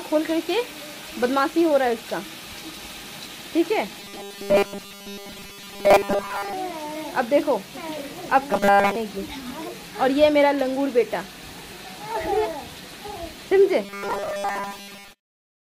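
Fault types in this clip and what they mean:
Robotic sound from repeated short buffers: a rigid, metallic 200 Hz buzz runs from 4.0 to 6.5 s, 8.51 to 8.96 s and 13.85 s to the end, likely a 5 ms block replayed repeatedly while most incoming audio is skipped.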